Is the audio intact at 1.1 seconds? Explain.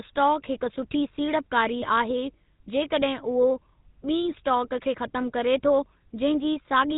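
No. At 1.1 seconds, as throughout the speech, the signal has passed through the GSM full-rate codec, whose coding damage fits the 13 kbps of that standard. It rebuilds the voice from a vocal-tract model fed by sparse, regularly spaced excitation pulses and discards everything above 4 kHz. The result is plainly audible: a muffled, band-limited voice with a buzzy, gravelly roughness.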